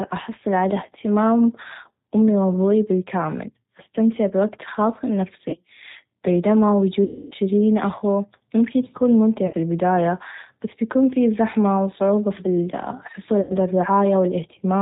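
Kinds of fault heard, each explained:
G.729 codec: The whole recording runs through a G.729 codec at 8 kbit/s. It rebuilds speech from a vocal tract filter, a pitch guess and a handful of pulses per frame, so nothing above 4 kHz survives. Here the damage is plainly audible: the speech is intelligible but sounds muffled, a bit rough and synthetic, with that processed edge you get from this codec.
VoIP packet loss concealed by the speech codec: There are four spots where packets dropped and the decoder filled in by stretching its last pitch and filter while fading the level. The worst is at about 7.04 s, where roughly 270 ms goes missing, which fits nine lost packets, and turns into a stretched sound that fades out. Shorter blips come after "و أستمتع بوقت خاص", between "أخو ممكن يكون ممتع" and "البدايه بس بيكون في", and after "و صعوبه في الحصول". Each leaves the speech weak or distorted for a moment after it returns.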